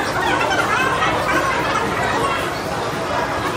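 From start to finish the audio is read two samples at a time, so it plays at double speed and a full octave, 12 semitones, too high. The reader's treating each pair of samples as one frame.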